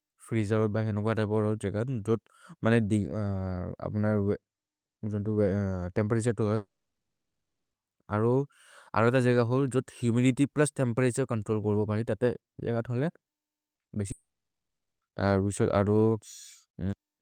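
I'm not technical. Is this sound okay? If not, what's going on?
No, it isn't. At 6.55 s the stream stops arriving, likely a long network dropout. The receiver stretches the last sound into a fading buzz, then there's about a second of silence until 7.75 s, and the missing speech never returns. Another gap runs from 14.11 to 15.03 s, with about 0.8 s of silence.

Shortly before that, at 13.75 s and 13.81 s, two tiny pieces of audio (about 40 ms each) arrive too late. This is short concealed packet loss. The receiver patches each hole by continuing the last sound, which you hear as a brief smear or wobble.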